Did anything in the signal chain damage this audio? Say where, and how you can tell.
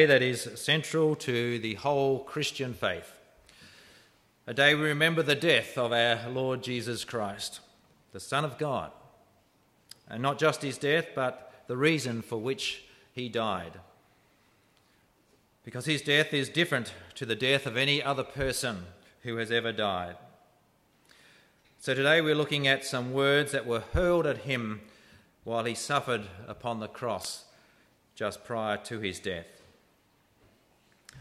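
Yes. At 27.21 to 27.25 s a brief glitch cuts through the sound. That is damaged data in a compressed stream at the codec stage: corrupted frames were misdecoded, and the decoder lost sync and jumped to the next valid frame header.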